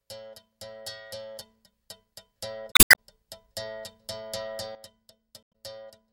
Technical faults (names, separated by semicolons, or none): damaged data in a compressed stream; sudden gain jump